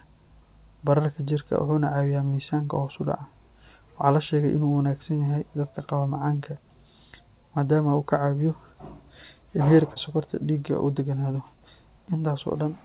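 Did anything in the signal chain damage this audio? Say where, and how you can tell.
Yes, at the network stage. There is short concealed packet loss from 9.94 to 9.98 s. About 20 ms of audio never arrived in time. The receiver covered the gap by extending the sound just before it, then crossfaded back into the real signal. You hear a brief smear or wobble there, and a short consonant can drop out. The clip is band-limited at 4 kHz, which fits a narrowband call codec such as G.711 A-law.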